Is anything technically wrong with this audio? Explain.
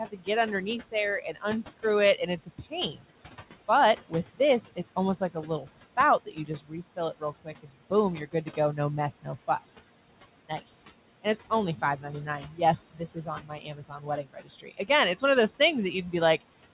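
Yes. Two faults are audible.

Noise suppressor artifacts run throughout. The suppressor turns down bands it judges to be steady noise, cutting it by about 17 dB. The noise sinks between phrases and rises under them.

Speech cut by the noise suppressor occurs at 0.11–0.28 s, 0.92–3.11 s, 3.68–9.7 s and 11.23–16.42 s. The suppressor mistook quieter speech for background and pulled it down by about 16 to 19 dB. Soft sounds and endings come out swallowed, totalling a few seconds across the clip.

The room noise underneath sits about 17 dB below the speech. Nothing is heard above 4 kHz, which fits a G.711 mu-law call path.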